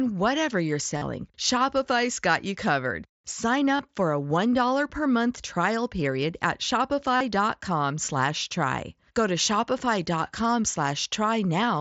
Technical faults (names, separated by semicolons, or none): concealed Bluetooth headset packet loss